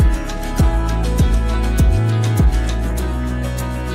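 Near the end of the audio, from 3.01 to 3.39 s, DAB burbling appears. The sound burbles over the programme. Short blips of noise pop up in single frequency bands. This points to weak DAB reception. A low rate of bit errors, well under one percent, gets past the error correction. Corrupted samples in the MP2 data then make individual sub-bands misbehave within a frame, across 22 frames.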